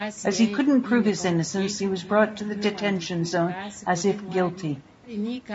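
Throughout the speech, the voice sounds plainly rough and grainy, with noise between the harmonics. This is likely low-delay AAC compression: its short frames blur pitch detail, which fits a bitrate around 32 kbps. A spectrogram shows smeared harmonic lines with speckled noise between them, and the call microphone processing leaves nothing above 8 kHz.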